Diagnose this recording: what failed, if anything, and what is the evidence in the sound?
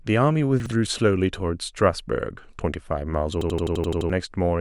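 Chunks out of order, at the driver or buffer stage. Between 0.60 and 0.72 s the speech jumbles briefly. Two 60 ms chunks have swapped places: one was written a chunk late and plays after the chunk that should follow it. No audio is missing. The order is wrong, so there are three hard joins where unrelated waveform edges meet. Those joins cause the scrambled moment.

System hang loop, also at the driver or buffer stage. From 3.41 to 4.10 s one 85.33 ms slice of speech repeats exactly, eight times. The result is a machine-gun stutter at about 11.7 Hz. The host stopped feeding new data, but the hardware kept cycling its ring buffer. The loop length fits a 4096-sample buffer. About 700 ms of real speech never reached the output.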